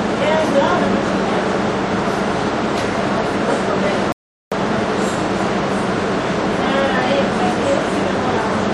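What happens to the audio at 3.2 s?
Nothing goes wrong at 3.2 s; the everyday sound plays through that moment intact, with no dropout, click or other fault.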